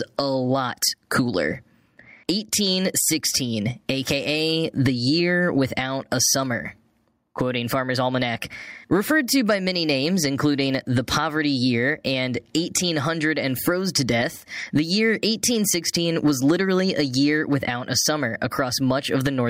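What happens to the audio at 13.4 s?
At 13.4 s, as through the whole clip, there is gain pumping: the level swings by roughly 15 dB, bringing loud and soft parts closer together and squashing the sound. The likely cause is excessive input gain reined in by a fast limiter. Unlike a noise gate, which silences the gaps, this makes the gaps louder.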